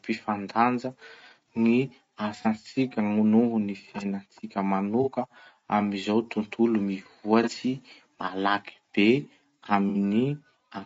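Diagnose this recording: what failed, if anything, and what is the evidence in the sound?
The speech sounds rough and grainy throughout, with noise between harmonics and a thin top band. This is a codec fault, likely low-delay AAC compression, whose low bitrate starves the harmonics at a rate that fits about 32 kbps.

Brief smeared, noisy patches occur at 2.42–2.47 s, at 5.03–5.09 s just after "ny fiainantsika", and at 7.43–7.48 s, with a longer one at 9.89–9.96 s. This is AAC frame loss with concealment, where the decoder rebuilds missing frames from the previous spectrum; the last patch fits two lost frames.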